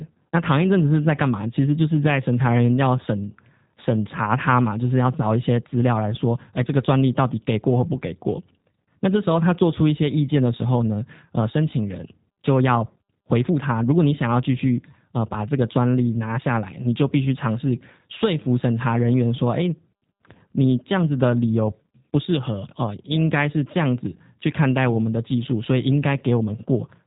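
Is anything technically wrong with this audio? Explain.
Yes. Throughout the speech, the sound is plainly rough and synthetic, with nothing above 4 kHz. This is G.729 codec damage: the voice is rebuilt from a vocal tract filter, a pitch predictor and a few pulses per 10 ms frame, a scheme that fits a low 8 kbit/s rate.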